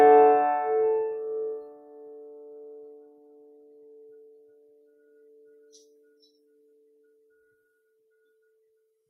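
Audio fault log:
Throughout: noise suppressor applied to music. A speech-oriented noise suppressor is still active on the music and treats sustained tones, ambience and reverb as background noise to be removed. Attacks pass largely intact, but held notes and decay tails are pulled down by roughly 15 dB once they settle. The gain rises and falls against the musical envelope, so the music pumps and flutters, and the sound thins out between onsets.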